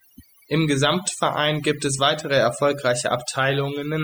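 From start to finish there's overdone noise removal. The denoiser was pushed too hard, so individual frequency bands near its noise estimate get shoved down or shut off. Quiet parts of the voice vanish with them, leaving a quieter background full of twinkly specks.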